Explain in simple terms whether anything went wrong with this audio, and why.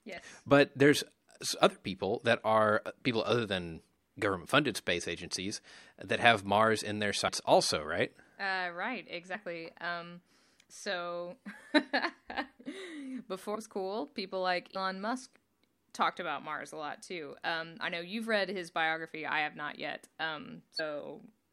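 Yes, the speech skips ahead five times, at 7.27, 12.56, 13.54, 14.75 and 20.76 seconds. Each time, the player drops a short chunk of audio and moves on. The first comes right after "in their". These are compressed frames skipped: blocks of the encoded audio went missing or were rejected as damaged, so about a tenth of a second vanishes, and around 13.54 roughly twice that, just before "was cool people like".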